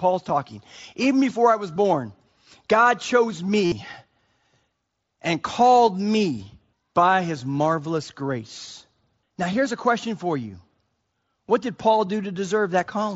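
At 3.65 s this speech recording turns briefly buzzy, holding a steady tone at full level until 3.72 s, with a faint warble as the real signal resumes. That is concealed Bluetooth headset packet loss: about 68 ms of audio never arrived, consistent with a run of nine lost packets, and the receiver covered the gap by repeating the closest-matching recent stretch of waveform, carried over the wideband mSBC headset link.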